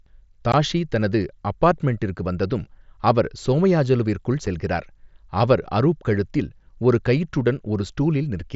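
Voice packets between headset and phone were dropped on the Bluetooth link and nothing filled the gaps, which is unconcealed Bluetooth headset packet loss on this mSBC connection. At 0.52 s, about 15 ms of speech vanishes, which fits two lost frames, just before "தனது அபார்ட்மெண்டிற்கு வந்ததும் அவர்". At 4.46 s, a shorter 7.5 ms hole, consistent with a single frame, falls between "சோமயாஜுலுவிற்குள்" and "செல்கிறார்". Each is a brief, hard-edged dropout that can click.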